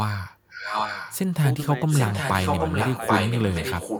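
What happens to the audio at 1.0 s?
At 1.0 s you're inside an echo leak, which runs from about 0.48 to 1.17 s. A delayed copy of the speech comes back roughly 0.79 s behind the original, and it's only a little quieter than the live talker. The likely cause is a far end on loudspeaker whose echo canceller didn't fully strip out what its microphone picked up, sending that leftover back down the line.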